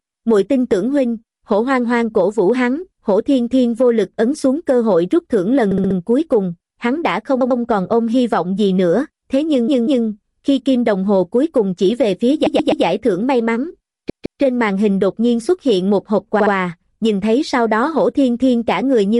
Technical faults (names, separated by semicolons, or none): repeated frames